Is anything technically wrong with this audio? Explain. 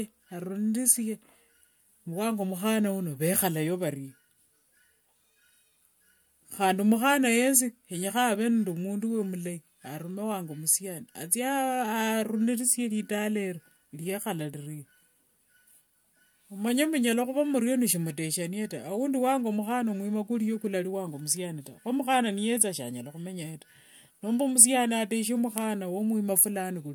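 No, nothing is technically wrong with this audio.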